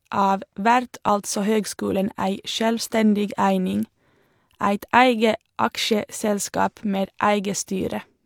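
At 1.09 s and again at 7.05 s the speech jumps forward: an overlap between stream segments, where about 30 ms is cut out at each join. The two skips sit roughly 6 s apart, matching the segment length.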